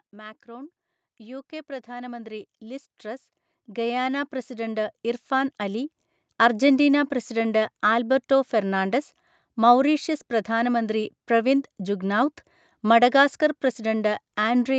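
From about 0.1 s to 6.69 s there's automatic gain rising: the gain control decided the input was too quiet and kept turning it up, by about 19 dB over those six-odd seconds. You hear the speech and the room noise behind it swell together, slowly, rather than a sudden jump, and it settles just before "പ്രസിഡന്റ് ആൽബർട്ടോ ഫെർണാണ്ടസ് മൗറീഷ്യസ്". The call path is audible too, with nothing above 8 kHz, which fits a wideband Opus setting.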